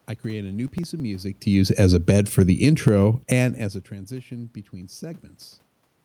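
From 0.67 to 1.00 s there is processor overload crackle. The processor falls behind and misses a short run of buffer deadlines, and the late audio is simply skipped. The result is a gritty tearing of hard-edged gaps over the speech, which fits a handful of buffers a millisecond or two long.

Between 1.52 and 2.91 s comes automatic gain falling. The gain control judges the input too loud or its background noise too strong and lowers its gain gradually by about 8 dB, so the speech and the room noise behind it sink together. This differs from the talker's own level shifts near 1 s and 3.5 s.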